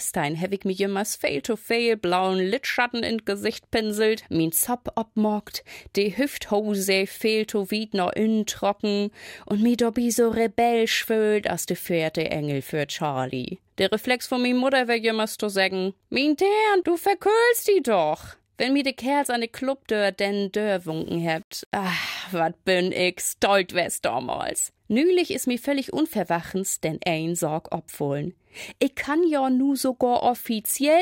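From 20.89 s to 22.39 s the sound turns grainy, with a distortion that tracks the signal and roughens its quieter stretches. This is low bit depth without dither, likely from rounding to about 8 bits, so the error rides on the signal at roughly 35 dB below it. On a waveform the quiet parts show visible staircase steps; a spectrogram shows a raised, signal-shaped broadband haze across that span.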